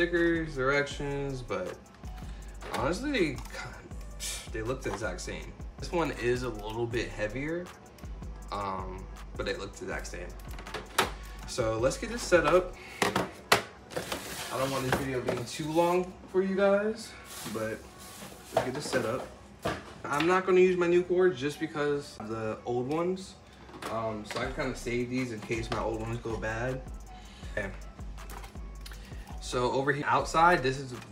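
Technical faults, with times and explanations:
22.18 s and 30.02 s, CD skip. Each time the player mutes very briefly, for roughly 10 ms and then only a few milliseconds, heard as a tick. The laser has jumped to another turn of the spiral, so the sound resumes from a different point on the disc.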